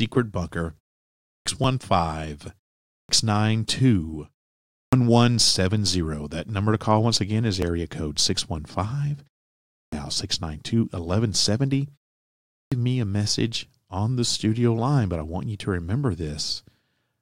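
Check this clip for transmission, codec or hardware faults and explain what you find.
Two faults recur in this speech: clipped starts after pauses and small skips from overlapping stream segments.

Clipped start after a pause occurs at 1.26, 2.89, 4.75, 9.74 and 12.52 s, the last just before "me a". After each silence of 0.38 to 0.63 s, the output device has dropped into an idle state and takes time to wake and lock before it plays again. Between 176 and 202 ms of the onset is lost each time, so the speech begins abruptly without its first sounds.

Overlap between stream segments occurs at 1.64 s and at 7.62 s, just after "call once again is". The timestamps of adjacent segments, which fit a 2 s segment length, claim the same stretch of time twice. The player discards the overlap even though that audio was never duplicated, removing roughly 9 to 14 ms. The waveform jumps across the gap, heard as a brief click or tiny skip.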